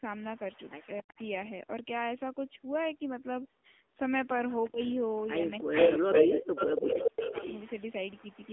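Throughout, the call runs over the AMR narrowband mobile codec at 7.4 kbps. It rebuilds the voice from a vocal-tract model fed with a sparse pulse pattern, so the sound is buzzy and somewhat synthetic, with plainly audible coding damage. The line passes roughly 250 Hz to 3.5 kHz, and nothing above 3.7 kHz survives, which leaves the top end dull and boxy. The call's microphone processing trims the deepest bass, as it should.

In the first 0.04 s, speech suppressed in double talk takes the level down by roughly 10 dB. This is likely an echo canceller that was unsure whether it was hearing its own talker or loudspeaker echo and turned the signal down.

From 0.15 to 1.29 s, an echo leak lets a faint copy of the voice through, delayed 274 ms and about 20 dB below the direct sound. This is likely because the far end's canceller failed to remove all of its loudspeaker pickup. Within that stretch, 1.02 to 1.18 s drops out almost completely, down about 40 dB.

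The leak returns from 4.51 to 5.24 s at a 401 ms delay and about 25 dB down. A brief suppression at 4.7 to 4.8 s dips the voice by roughly 25 dB.

From 5.46 s to the end, the 401 ms echo is as loud as the speech itself, so a second copy of the voice trails the first. The canceller likely fights it by gating the talker. It nearly silences the voice from 5.6 to 5.77 s, then again in pieces between 5.99 and 7.44 s, about a second in total, each time by roughly 40 dB. The result is a chopped voice.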